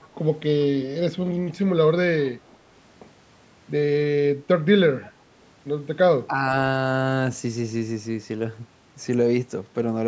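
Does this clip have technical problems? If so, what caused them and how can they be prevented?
Yes. From 0.02 to 0.15 s, a very faint copy of the sound arrives 321 ms late. It is a distinct delayed repeat rather than reverb, so it is likely an echo leak. A headset, or better echo cancellation at the loudspeaker end, prevents it.

From 6.27 to 6.35 s, the speech briefly dips by a small amount without fully cutting out as a dropout would. This is likely speech suppressed in double talk. Tuning the echo canceller to suppress less during overlapping talk prevents it.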